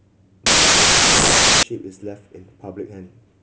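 From 0.46 s to 1.63 s the speech turns into loud, harsh noise with the original faintly buried inside, running 1.5 times too fast and raised in pitch. This is a wrong sample width fault, consistent with 16-bit samples read as packed 24-bit, so most values straddle neighbouring samples.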